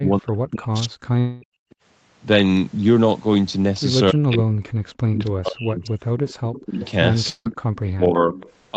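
From 0 to 1.59 s the speech dips and breaks into pieces, falling by about 40 dB at its deepest over roughly a second and a half in total. This is speech suppressed in double talk, likely because the echo canceller heard both sides at once and turned this talker down along with the loudspeaker echo. Unlike a dropout, the level ducks and recovers in fragments rather than the signal stopping.

Inside that stretch, from 1.19 to 1.44 s, there is a long network dropout, likely from about 220 ms of audio never arriving. The receiver fills the whole gap by stretching the last sound into a fading buzz, and speech resumes further on with that part missing.

At 1.70 to 1.75 s a faint echo leak appears, likely residual loudspeaker pickup sent back. It is a copy delayed by 278 ms, about 35 dB below the speech. The fixed lag separates it from room reverberation.

From 4.11 to 8.37 s double-talk suppression returns, again up to about 40 dB deep, cutting roughly two seconds of speech into chopped pieces. 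Within it, from 6.28 to 7.80 s, the echo leak is much stronger, about 15 dB under the speech at the same 278 ms delay.

A second long network dropout runs from 7.30 to 7.47 s. About 160 ms is lost, and the concealment fades into about 40 ms of silence before speech returns.

The echo leaks again from 8.35 to 8.52 s, about 25 dB down, while the whole call stays band-limited to 8 kHz.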